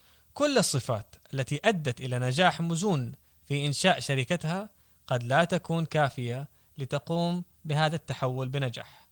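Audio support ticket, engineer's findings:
Drift correction step, 0.68–1.23 s: clock-matching resampler likely cut playback rate in one jump to refill its buffer. Sound runs 6% slow, pitch drops about 107 cents, roughly a semitone, then snaps back to normal.

Drift correction step, 6.95–7.97 s: same component, likely draining its buffer this time, raised the rate by 6%. Sound speeds up and sharpens about 101 cents for about a second, then returns abruptly. Opus path at 20 kbps shows light coding texture only.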